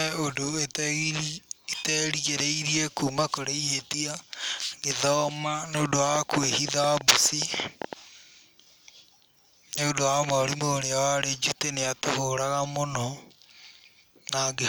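Speech with a train of clicks from 6.16 to 7.94 s, right after "ngĩthoma nĩ ũndũ wa". About fifteen similar pops arrive unevenly, roughly 7.3 per second. They stand far above the speech level. Nearby equipment interference or a faulty connection or power supply is the likely cause.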